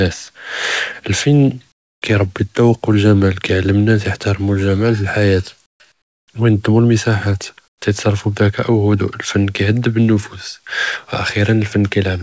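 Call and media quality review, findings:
Comfort noise in place of the background at 1.72–2.02 s (before "כירבּי אלזוּק ו אלג'מאל"), 5.66–5.80 s, 5.92–6.28 s and 7.68–7.82 s (before "יתְסַרְפוּ בדִיקאא'"). Real room tone drops to flat, featureless hiss, about 24, 19, 16 and 11 dB quieter. Likely DTX on the sender, with the receiver synthesising noise through gaps. Audio tops out near 8 kHz, which fits a G.722 path.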